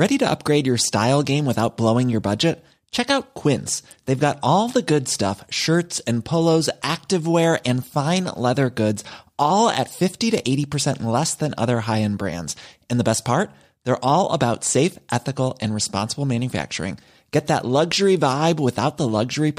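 Nothing in the speech recording stood out as a technical problem on listening.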